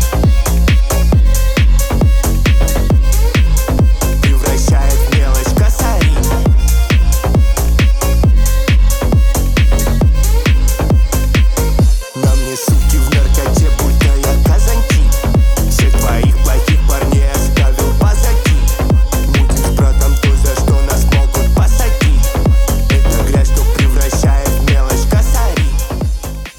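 A low thump lands at 3.78 s and another at 7.65 s, each a brief dull knock under the sound, which carries on unchanged. Both are DC steps: the waveform's zero line jumps suddenly, by about -12 dBFS the first time and about -10 dBFS the second, as when a converter recalibrates or an offset input is switched in. A 20 Hz high-pass then pulls each offset back toward zero, so the step decays rather than holding.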